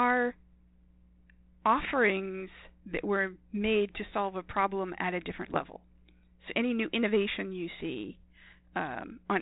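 Speech sent over a G.726 ADPCM link, whose light coding grain fits 32 kbit/s, suffers bit errors on the ADPCM link at a fraction of a percent, from 1.83 to 1.94 s and 5.46 to 5.65 s. Each flipped bit knocks the decoder's step size and prediction off track, producing pops, rough bursts and brief jumps in level.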